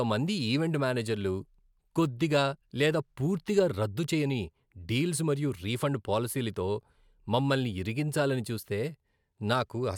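No technical faults are audible.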